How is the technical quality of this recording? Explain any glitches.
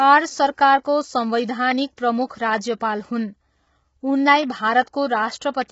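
The quality is poor: heavy compression damage runs through the whole speech clip. From start to finish the voice sounds rough and grainy, with noise filling the gaps between harmonics and nothing above 7.7 kHz. This is likely low-delay AAC compression (AAC-ELD), whose short frames resolve pitch harmonics poorly; the damage fits a bitrate near 16 kbps. Unlike a simple low-pass filter, the graininess comes from the codec, not just a lost top band.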